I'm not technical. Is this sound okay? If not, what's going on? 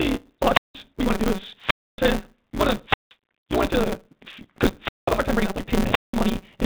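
No. Three separate problems are audible in this speech recording.

First, the speech has the sound of a Bluetooth CVSD headset codec, the low-grade link used by phone headsets. Nothing above about 4 kHz comes through, so the speech sounds muffled and phone-like. The s sounds are scratchy, and a grainy hiss sits underneath throughout.

Second, there is a block size mismatch (truncated). One stage hands over longer chunks of audio than the next stage takes in, and the leftover end of each chunk is discarded. The result is a steady buzz at 188 Hz and speech running about 1.88 times too fast while keeping roughly its normal pitch. This fits a stage reading 256 samples at a time.

Third, there are five wireless microphone squelch dropouts. In each one the radio signal fades, the receiver mutes, and the speech vanishes into near silence before returning. They start at 0.5 s, 1.54 s, 2.84 s, 4.78 s and 5.82 s, and most holes last about a third of a second. 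The one at 1.54 s is longest, at about half a second.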